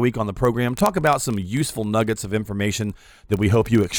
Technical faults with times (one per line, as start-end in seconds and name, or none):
0.13-3.99 word clock ticks